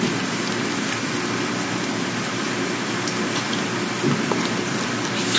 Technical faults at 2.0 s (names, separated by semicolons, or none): none